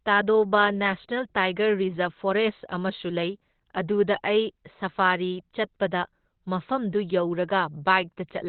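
Opus compression, likely the cause, runs through the whole clip. Nothing survives above about 4.2 kHz, and the speech sounds muffled and hoarse with heavy damage. This points to the codec's narrowband speech mode at a very low rate, around 12 kbps.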